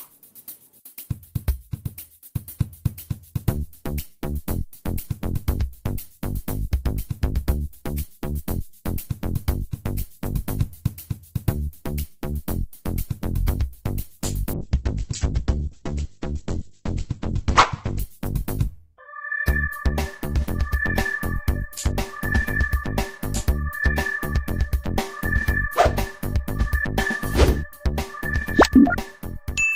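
A call bitrate drop runs from 14.54 to 18.07 s. The connection's bandwidth estimate collapsed, so the encoder was forced onto a much smaller bit budget, with a fall from around 48 kbps to roughly 9 kbps fitting what is heard. For about 3.5 s, the top of the spectrum is cut from 20 kHz down to 8 kHz and the coarser coding makes the sound muffled, rough and watery before full quality returns.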